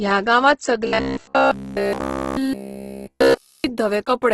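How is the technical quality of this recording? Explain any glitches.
Pretty rough, honestly, with two problems stacked on top of each other.

From start to finish there's heavy Opus compression damage, likely from encoding in its music mode at a low bitrate around 12 kbps. Nothing survives above about 12.1 kHz, and bands starved of bits get padded with folded or noisy content, so the speech comes out grainy and rough.

Then from 0.87 to 3.64 s you get a robotic sound from repeated short buffers. It's likely that new audio arrived too slowly, so playback kept looping the last chunk, essentially all of it, while the real audio was skipped. That forces a steady buzz at about 66.7 Hz, which fits 15 ms repeats, and the speech turns into a stiff, metallic drone.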